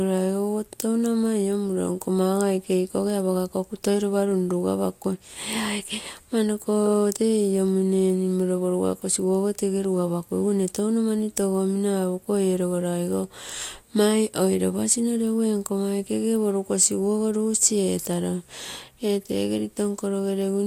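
Speech with two brief moments of hard clipping, at 0.80 s and 7.12 s, where a loud peak pushed about 6 dB and then about 4 dB past what a stage in the chain could pass, so the waveform tops were sliced flat. Each is heard as a short, gritty crackle riding on the peak itself. Unlike a random click or dropout, it lands only on the loudest instants and adds bright harmonic edge rather than a gap.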